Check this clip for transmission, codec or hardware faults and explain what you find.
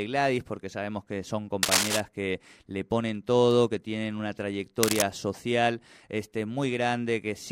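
Two bursts of cable scratch noise occur: 1.63 to 2.00 s, after "porque sabemos que son", and 4.83 to 5.02 s, after "todo que tienen una". Dense, uneven rustling sits roughly level with the speech, likely from a worn connector whose contact resistance fluctuated while moved. Unlike isolated clicks, it is a continuous scratchy texture.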